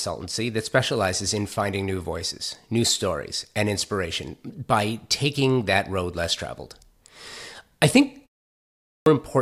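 At 8.68 s, speech resumes after a pause of about 0.49 s, and there is a clipped start after the pause. The output device went idle in the silence and was slow to wake. The first 0.38 s is lost, up to 9.06 s. The speech bursts in abruptly, missing its opening sounds.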